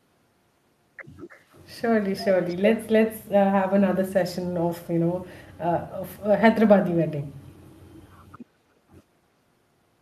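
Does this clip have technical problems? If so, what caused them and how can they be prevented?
Yes. A faint delayed copy of the speech, an echo leak, appears from 1.29 to 1.59 s (about 312 ms behind the original, roughly 30 dB down) and again from 2.43 to 2.55 s (about 318 ms late, around 25 dB down). On a spectrogram this shows as pale, shifted repeats of the preceding harmonics. The likely cause is a far-end loudspeaker whose echo canceller let residue through. Using a headset there, or better-tuned echo cancellation, prevents it.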